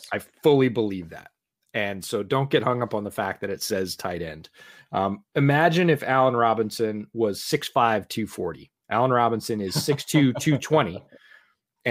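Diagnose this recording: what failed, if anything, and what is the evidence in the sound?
Nothing failed here as far as the ear can tell, since the speech comes across without any dropout, glitch or distortion that would point to a problem at any stage of the chain.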